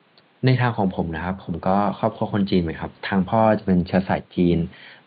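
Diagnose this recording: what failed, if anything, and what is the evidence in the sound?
Nothing failed; faint room noise sits well below speech.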